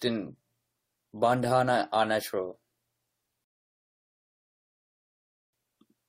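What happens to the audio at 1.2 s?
Nothing goes wrong at 1.2 s: the speech continues intact through that moment, with no dropout, click or distortion.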